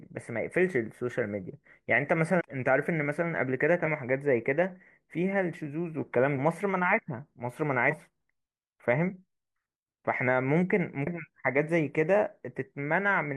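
At 2.37–2.41 s, 3.82–3.88 s, 6.34–6.37 s, 7.87–7.93 s and 11.03–11.07 s the speech is broken by brief glitches from damaged data in a compressed stream. Corrupted bytes make the decoder misread frames and lose sync until it finds a valid header. On a spectrogram each event shows as a narrow vertical smear of energy that doesn't fit the speech harmonics. The waveform shows abrupt discontinuities lasting about 30 to 60 ms.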